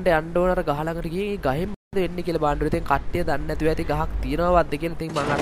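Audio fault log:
1.74–1.95 s, Bluetooth dropout: the sound cuts to silence for about 0.2 s, then returns further along, as though it kept playing underneath. This is likely a run of wireless packets arriving too late and being discarded.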